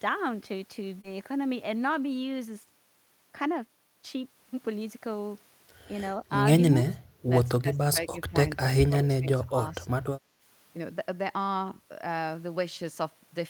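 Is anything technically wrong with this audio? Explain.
Yes, there are four kinds of fault in this speech clip.

Short concealed packet loss, about 1.01 to 1.05 s: about 20 ms of audio arrived too late, so the receiver extrapolated the preceding sound to fill it, leaving a brief smear.

Lost packet rebuilt from error correction, 1.03 to 1.05 s: one packet was replaced by its low-bitrate copy from the following packet, so those 20 ms sound rougher and noisier instead of silent.

Speech suppressed in double talk, at 6.71 to 6.88 s, 7.61 to 8.35 s, 8.56 to 8.60 s and 8.77 to 9.85 s: the echo canceller likely confused the talker with loudspeaker echo and pulled the voice down, by up to around 20 dB.

Background gated by the echo canceller, 10.21 to 10.41 s: while the loudspeaker played, the microphone was turned down, so the room sound dips by about 7 dB for roughly a fifth of a second.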